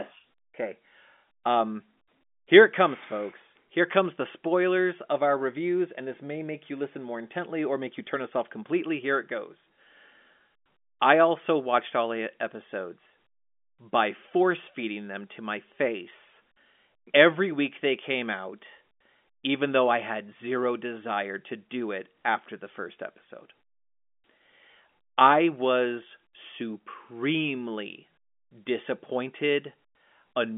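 Nothing here needs flagging: the speech comes over an ordinary G.711 telephone line, with the narrow band of roughly 200 Hz to 3.5 kHz that such a line gives, and no fault turns up anywhere along the way.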